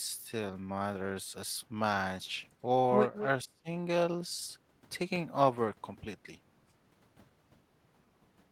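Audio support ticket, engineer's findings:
Echo leak, 3.14–3.26 s: delayed copy of the speech, about 217 ms behind, roughly 10 dB down; likely far-end loudspeaker pickup not fully cancelled by its echo canceller.

Speech suppressed in double talk, 3.44–3.68 s: speech dips deeply, around 30 dB, for about 200 ms; echo canceller likely misjudged overlapping talk as echo and attenuated it.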